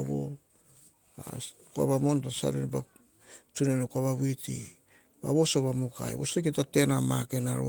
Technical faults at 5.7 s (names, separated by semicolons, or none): none